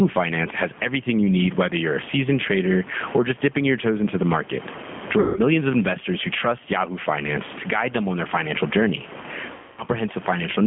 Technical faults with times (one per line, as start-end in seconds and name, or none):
0.00-10.66 gain pumping
0.00-10.66 G.729 codec
5.20-5.41 VoIP packet loss concealed by the speech codec
9.54-9.84 VoIP packet loss concealed by the speech codec